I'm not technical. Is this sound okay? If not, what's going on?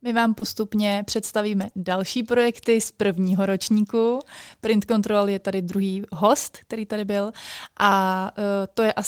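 No. Two kinds of network damage are audible in this speech.

Short concealed packet loss occurs at 0.39 to 0.43 s and at 1.69 to 1.73 s, just before "další projekty z prvního". Each time about 20 ms never arrived, and the receiver papered over it by stretching the preceding sound, which leaves a brief smear or wobble.

A lost packet rebuilt from error correction appears at 0.41 to 0.43 s (20 ms) and at 1.61 to 1.67 s (40 ms, which fits two lost packets). A rough backup copy was played, so there is no gap, but those moments sound grainier and noisier.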